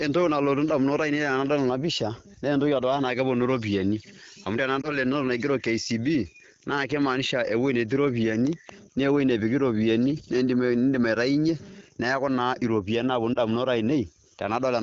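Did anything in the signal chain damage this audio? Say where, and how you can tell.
Yes, lost AMR speech frames at the network stage. Brief dips and warbles follow "iropiani amu" (4.81–4.97 s) and "iropiani naaponu" (13.34–13.38 s). Each suggests one 20 ms frame concealed with fading gain.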